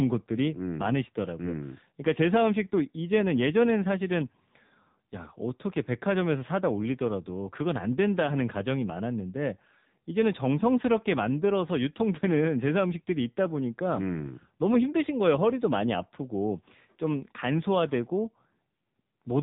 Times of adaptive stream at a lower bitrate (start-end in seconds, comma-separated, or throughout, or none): none